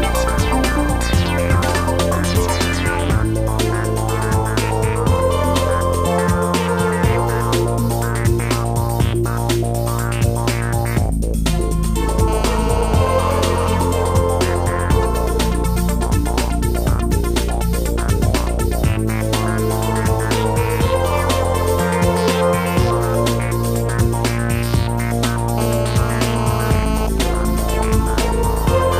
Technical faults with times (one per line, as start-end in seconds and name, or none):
12.28-13.76 GSM phone buzz
25.58-27.07 GSM phone buzz
27.18-28.86 GSM signalling bursts